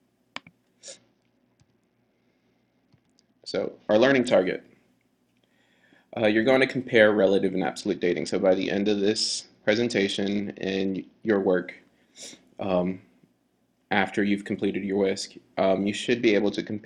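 From 0.82 to 4.30 s, 7.80 to 11.38 s and 16.07 s to the end, a Bluetooth SBC bit pool drop dulls the treble and adds gritty quantisation noise. The sound points to the bit pool falling from about 28 to 8, roughly 72 kbps, starving the upper sub-bands.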